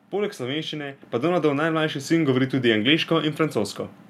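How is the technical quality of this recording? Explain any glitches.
The recording has one clear glitch. At 1.02 s the whole speech signal, voice and background noise alike, suddenly jumps louder by about 6 dB and stays there. That simultaneous rise is the mark of a microphone volume stepped up: the calling software judged the input too quiet and raised the device's input gain in a single jump, so everything reaching the microphone was amplified together rather than the voice alone.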